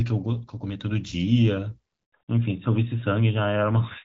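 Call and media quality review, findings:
Handover gap, 2.05 to 2.13 s: sound drops out fast, 80 ms of dead silence. Likely the network handover; no speech frames delivered while the call moved links, so that stretch is just gone.

Fallback to narrowband, 2.13 s to end: nothing above 4 kHz from there on, duller and rougher. Call falls off HD Voice (clean light AMR-WB before, fits 12.65 kbit/s) onto narrowband AMR, sounds like 12.2 kbit/s.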